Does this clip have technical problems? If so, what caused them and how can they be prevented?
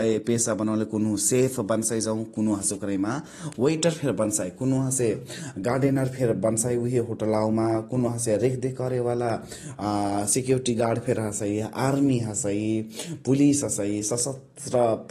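Yes. The speech sounds dull and smeared throughout, with nothing above 12.5 kHz. This is likely AAC compression at a low bitrate, around 32 kbps, which drops detail it judges inaudible. Encode at a higher bitrate to prevent it.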